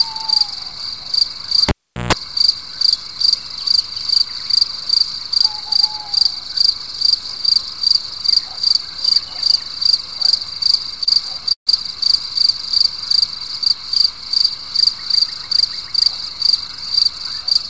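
At 1.69 s a cable is pulled and plugged in while live, and the fault runs to 2.13 s. The first pop shows as a sharp vertical spike in the waveform and a full-height stripe on a spectrogram. About 390 ms of near silence follows as a flat trace. Within that gap, roughly 140 ms of 60 Hz mains buzz appears while only the tip makes contact. It shows as a bright line at 60 Hz with harmonic rungs above it. A second pop marks the sound returning.

From 11.05 to 11.08 s there is a short stall from a late packet. The packet arrived behind schedule, the jitter buffer ran dry, and the receiver held the last sound for 18 ms until it came. Nothing is lost. The sound simply sustains a touch too long with a faint buzzy quality. On a spectrogram the frequency pattern freezes into a brief horizontal smear, and the waveform shows a few repeated-looking cycles before normal motion resumes.

From 11.52 to 11.69 s the audio freezes for 142 ms, likely a call audio freeze caused by packets held up in transit that emptied the jitter buffer. 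The last sound is carried on as a fading buzz, then about 110 ms of silence follows before playback picks up where it stopped, with nothing skipped. The spectrogram shows a smeared tail dying into an empty band. The waveform shows a decaying envelope and then a flat line.

The whole clip passes through a G.722 call path at 64 kbps, so on a spectrogram nothing appears above 8 kHz throughout.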